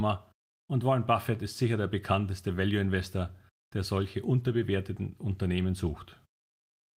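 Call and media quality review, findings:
No faults found in this call and media quality review of the speech.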